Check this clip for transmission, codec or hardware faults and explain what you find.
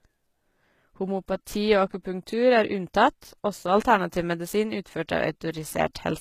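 One codec fault is present, running throughout this speech. Likely HE-AAC compression: copied lower bands rebuild the treble, making s sounds gritty and metallic, with smeared, repeated upper bands on a spectrogram ending sharply at 14.9 kHz, which fits a low bitrate near 20 kbps.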